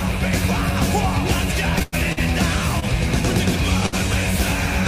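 From 1.79 to 2.22 s the sound falls into repeated stalls (stutter). Packets arrived late four times in quick succession, and each time the receiver extended what it had just played while it waited. About 163 ms is filled in this way, the longest wait 100 ms, roughly 39% of that stretch. Nothing is lost, so it drags and catches rather than skipping ahead the way a dropout would.

A short stall from a late packet follows at 2.80 s, held for 26 ms, and another at 3.86 s, held for 62 ms. Each time the buffer ran dry once and the last sound was stretched until the packet came, then playback resumed from the same place. It is a single held moment with a slight buzz or dip, not a string of hitches.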